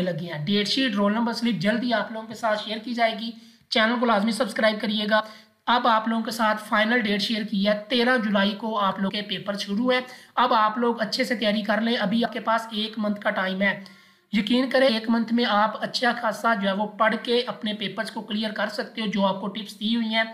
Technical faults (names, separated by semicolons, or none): compressed frames skipped